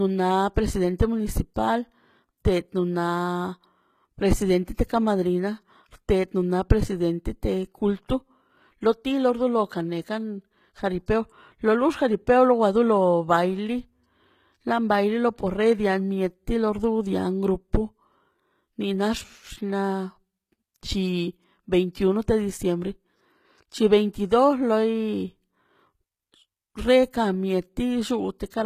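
From the start the speech carries plainly audible codec damage, and the likely cause is HE-AAC compression. The codec keeps only the lower spectrum as real coded signal. It synthesises the treble by copying lower bands upward and shaping them coarsely. So the top end sounds bright but false. Its harmonics do not line up with those below. Sibilants come out gritty and metallic. Nothing is present above 14.9 kHz. The damage fits a bitrate near 20 kbps.

At 11.06 s a pre-echo appears. A sharp attack lands late in a transform block. The codec spreads its quantisation noise across the whole block. Noise sized for the loud attack therefore fills the quiet moment just before it. The result is a brief hiss, about 19 ms long, ahead of the onset. The attack itself sounds softened and smeared rather than crisp.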